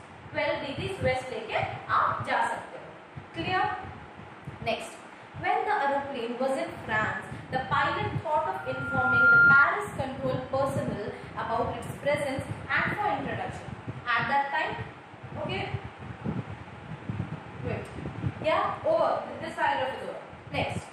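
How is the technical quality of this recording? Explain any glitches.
One glitch stands out. Loudspeaker feedback squeal, 8.56 to 9.67 s: the microphone re-amplifies its own loudspeaker, so a 1.4 kHz tone swells over most of a second to roughly 15 dB above the sound.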